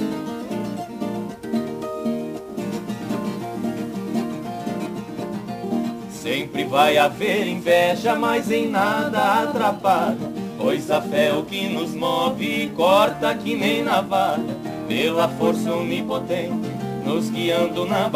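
Sample clock jitter runs throughout: a timing wobble around ten microseconds adds a level-dependent hiss, about 25 dB down, shown as broadband haze on loud, bright passages, absent in silence.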